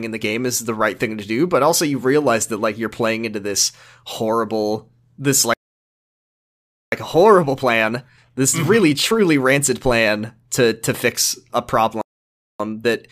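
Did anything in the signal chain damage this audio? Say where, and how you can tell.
Yes. The damage is at the playback stage. Two playback stalls cut the speech dead mid-flow: right after "into this horrible this", from 5.54 to 6.92 s (about 1.39 s of silence), and after "to to fix a", from 12.01 to 12.60 s (about 0.58 s). That points to a player that likely starved of data or had its output thread blocked.

Each stall is followed by time-compressed catch-up, where the player works off its backlog. From 6.92 to 9.92 s the speech runs at about 1.25 times normal speed, ending just before "to to fix a". From 12.60 s to the end it runs at about 1.15 times. The pitch stays normal while the pace is hurried. That is the sound of small segments being cut out and cross-faded, not resampled.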